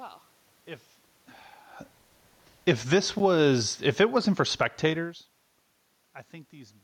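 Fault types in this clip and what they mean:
Automatic gain falling, 2.65 to 5.83 s: the gain control judged the input too loud, or its background noise too strong, and turned its gain down gradually, by about 6 dB over roughly three seconds. The speech fades steadily, and the room noise beneath it sinks by the same amount. That shared drop sets it apart from the talker's own movements around 1.5 s and 5 s, where the voice level shifts without the background shifting along with it.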